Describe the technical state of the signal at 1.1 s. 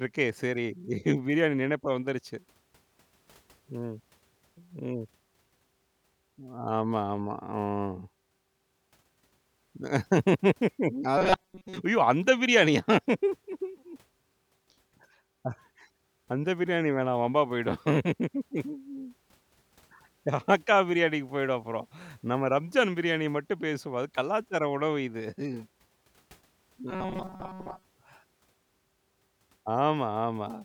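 Nothing is wrong with the signal at 1.1 s; the audio is intact at that point.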